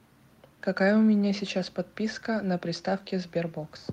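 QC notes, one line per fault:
Nothing stood out on listening.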